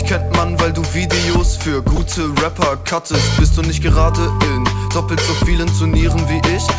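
Sound dropped by the voice detector at 1.96 s: a 20 ms slice of the sound gives way to steady comfort noise before it resumes. The likely cause is the sender's voice detector briefly classing that moment as background and pausing transmission. The band stops at 8 kHz, which fits a wideband call codec such as G.722.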